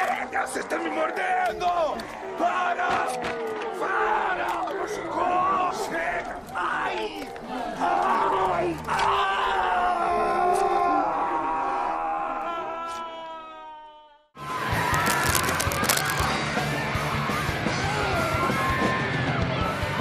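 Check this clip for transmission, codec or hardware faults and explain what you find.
One hardware fault stands out. From 14.94 to 16.29 s, dense, uneven scratching and rustling sits over the sound, only a little quieter than the signal itself. This cable scratch noise is likely a worn cable, connector or control being moved, its contact resistance jumping rapidly.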